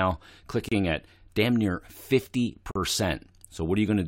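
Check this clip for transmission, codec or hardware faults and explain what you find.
Two gaps between stream segments interrupt the speech, at 0.69–0.72 s and 2.71–2.76 s. Misaligned segment time stamps, which fit one-second segments, leave holes that the player fills with silence, about 30 ms and 42 ms long. Each is heard as a hard-edged dropout, the first just before "at damn near".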